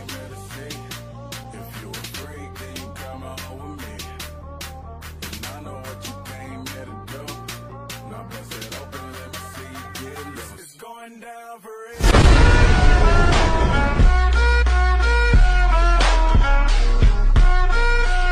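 Nothing in the audio stands out as a technical fault, so there's no timeline of problems to walk through here.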